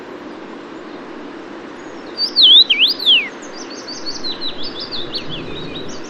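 Twice, likely because the output buffer went unfilled, a block of samples came out as zeros, a block of digital silence. At 2.18 s the gap lasts about 1.33 ms, fitting a 64-sample block. At 5.18 s it is only 0.27 ms. Each abrupt drop and return makes a brief tick.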